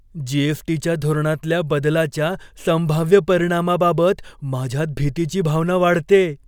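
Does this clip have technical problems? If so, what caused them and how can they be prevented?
No, nothing in this speech recording points to a technical fault, so there is no cause to trace and no prevention step needed.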